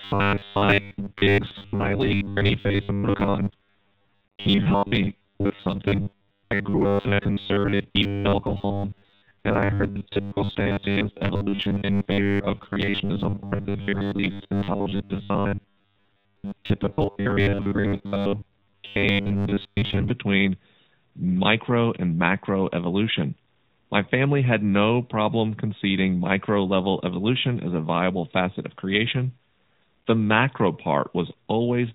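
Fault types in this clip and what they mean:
AMR narrowband mobile codec: The speech sounds thin and audibly buzzy and synthetic, with nothing above 4 kHz. This is phone-network coding that rebuilds the voice from a vocal-tract model and a few pulses per frame, at a bitrate the damage suggests is mid-range, near 10 kbps.
Robotic sound from repeated short buffers: From 0.01 to 20.11 s the voice becomes a rigid metallic buzz at 100 Hz that still roughly tracks the speech. The likely cause is late audio being covered by looping a short stretch, fitting a 10 ms buffer, with most of the real sound skipped.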